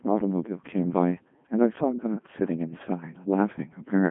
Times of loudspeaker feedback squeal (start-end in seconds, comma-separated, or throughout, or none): none